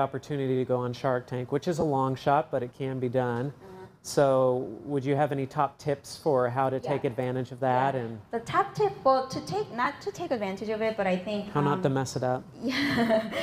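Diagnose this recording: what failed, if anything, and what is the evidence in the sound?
Lost LE Audio frames at 1.81 s and 9.84–9.86 s, at the codec stage over the Bluetooth link. Each gap of about 15 ms, consistent with two 7.5 ms LC3 frames, is filled by concealment that repeats the last spectrum with randomised signs, leaving a brief noisy smear.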